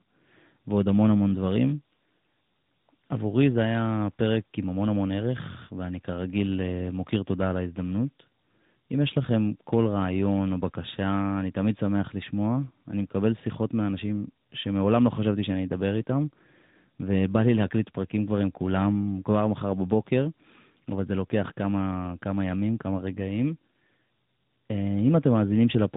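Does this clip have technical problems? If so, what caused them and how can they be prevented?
Yes. Tandem speech coding affects the whole clip. The sound fits two speech coders in a row, likely G.726 then AMR-NB at 10.2 kbit/s, with a G.711 A-law link in between. Each re-encodes the previous one's errors, leaving rough, muffled, warbly speech with nothing above 3.8 kHz. To prevent it, keep one codec end to end, using transcoder-free operation so the coded stream crosses network borders without being decoded.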